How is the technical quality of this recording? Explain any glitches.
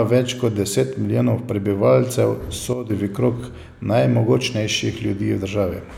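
The recording has one glitch. At 2.73 to 2.90 s, just after "kot deset milijonov prebivalcev", a sudden gain jump occurs: a gain change was likely applied without a ramp, dropping speech and background together by about 9 dB.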